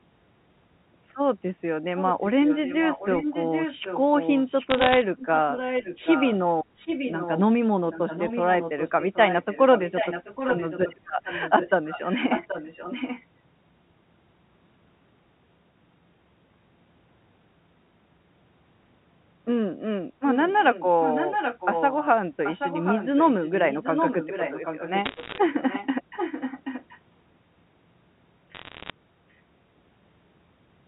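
From 1.82 to 6.36 s there's an echo leak: a copy of the speech comes back 780 ms late, about 10 dB down. It's likely a far-end speakerphone whose canceller isn't fully removing it. Inside that stretch, 4.70 to 5.02 s, bit errors on the digital phone line add sharp ticks and crackle. Louder echo returns at 6.76 to 7.41 s, then the quieter echo again from 7.92 to 13.26 s. It's louder once more from 20.3 to 22.08 s, and quieter from 22.44 to 26.99 s. There's more crackle at 25.05 to 25.38 s, and a final burst at 28.55 to 28.90 s.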